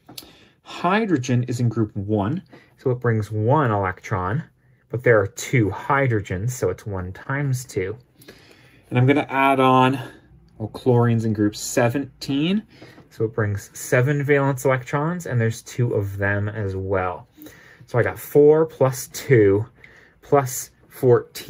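At 7.23 to 7.27 s there is short concealed packet loss. About 20 ms of audio went missing; the receiver patched 12 ms by extending the preceding sound, leaving a brief smear.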